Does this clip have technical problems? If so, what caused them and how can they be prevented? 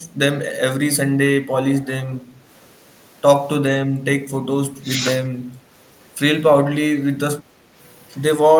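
Yes. Speech suppressed in double talk occurs at 0.11–0.19, 1.12–1.19, 1.99–2.18, 4.20–4.53, 4.71–5.04 and 7.45–7.78 s. The speech level dips by about 5 dB, and by about 10 dB in the two dips between 4.2 and 5.0 s. This is likely an echo canceller that heard both ends at once and turned this talker down along with the echo. Stronger double-talk detection in the canceller, or a headset that removes loudspeaker echo, prevents it.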